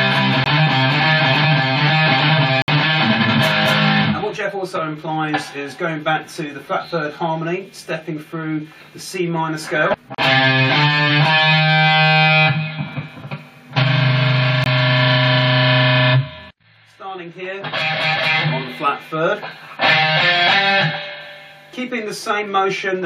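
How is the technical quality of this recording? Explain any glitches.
The recording has four dropouts, three from one fault and one from another.

Blocks of digital silence occur at 0.44–0.46 s, 2.62–2.68 s and 14.64–14.66 s. Each is a run of samples set to zero, likely because the output buffer wasn't filled in time. The sound stops and restarts with no fade. The 20 ms blocks and the 60 ms block are long enough to be heard as short holes rather than ticks.

A gap at a join of encoded pieces appears at 10.15–10.18 s, about 37.5 ms of silence where separately encoded segments were joined with their start delay and end padding left in. Its edges are smeared by the codec rather than clicking cleanly, and the sound then continues from where it stopped.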